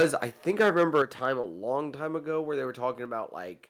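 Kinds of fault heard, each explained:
Microphone overload: From the start to about 1.26 s the loudest peaks go roughly 7 dB past the converter's limit, and a few percent of samples get their tops sheared off. That gives the louder syllables a harsh, crackly edge, most likely from the input gain being set too hot.
Lost packet rebuilt from error correction: Twice a 20 ms chunk went missing, at 0.87 s and again from 1.43 to 1.45 s. Each was filled in from the low-bitrate backup copy carried in the next packet, so there's no gap, just a brief, rougher and noisier moment.
Microphone volume stepped down: At 1.02 s, still inside the clipped stretch, the whole level drops by about 6 dB in one go, with the background dropping along with everything else. Then at 3.06 s, right after "ago where they", it drops again by about 2 dB. That's likely the call software turning the mic input down in steps.
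Short concealed packet loss: Between 1.41 and 1.45 s about 20 ms never arrived in time. The receiver bridged roughly 15 ms of it by extending the preceding sound, then blended back into the real audio. You hear it as a quick smear or wobble.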